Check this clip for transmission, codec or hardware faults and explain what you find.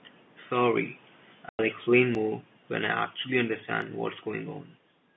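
Three kinds of fault turn up in the speech: a falling automatic gain, a stretch of packet loss filled with silence, and two short skips that are likely dropped buffers (overruns).

From 0.53 to 2.67 s the automatic gain falls by about 8 dB. The control judged the input too loud or its background noise too strong and eased its gain down, so the speech and its room noise sink together. On the waveform the envelope tapers steadily across that span.

From 1.49 to 1.59 s there is packet loss filled with silence. That 100 ms of audio never arrived, and the receiver inserted silence, which points to ten 10 ms packets. It sounds like a hard hole with abrupt edges, seen as a flat gap and a blank spectrogram column.

At 2.15 s and 3.82 s the speech skips ahead, likely from a dropped buffer (overrun): samples were overwritten before being read, and the two sides were spliced together. The loss is around 20 ms and then around 10 ms. 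Each shows as a waveform discontinuity and a thin vertical broadband line, with no silence.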